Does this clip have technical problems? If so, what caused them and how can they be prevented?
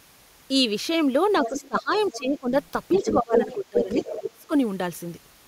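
Yes. A second voice leaks in at 1.35 to 1.78 s, 1.95 to 2.19 s and 2.93 to 4.18 s, about 10, 20 and 5 dB below the speech. This is the other side's voice leaking through. Its likely cause is loudspeaker echo that the echo canceller missed. A headset would prevent it.

The speech dips at 1.48 to 2.53 s, 3.02 to 3.9 s and 4.17 to 4.52 s, by up to about 15, 20 and 25 dB. This is speech suppressed in double talk. Both sides overlapped, and the canceller likely turned everything down. A headset or better double-talk handling would prevent it.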